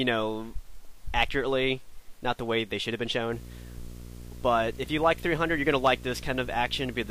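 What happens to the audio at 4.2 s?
At 4.2 s you're in the middle of a video or display buzz that starts at about 3.32 s and runs to the end. A screen or video cable is coupling into the audio, giving a 60 Hz field-rate buzz with hash on top, sitting roughly 15 dB under the programme.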